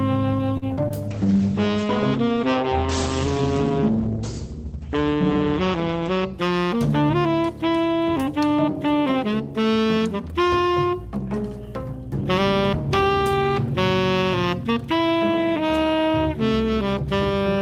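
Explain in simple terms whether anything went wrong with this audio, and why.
A short stall from a late packet hits at 0.57 to 0.64 s: a packet arrived late, so the last sound was held for a moment until it caught up.

Short concealed packet loss follows at 0.74 to 0.78 s and again at 0.88 to 0.92 s. Small pieces never arrived, and the receiver covered each gap by extending the previous sound.

A call bitrate drop runs from 1.1 to 6.9 s. The connection seemed to shrink, so the audio was sent with much less detail. It sounds rougher and duller, with the highest sounds cut off.

A jitter buffer speed-up occurs at 5.91 to 6.19 s. Too much audio had piled up, so the receiver trimmed tiny slices, about a twentieth of a second in all. That stretch plays roughly 13% faster at the same pitch.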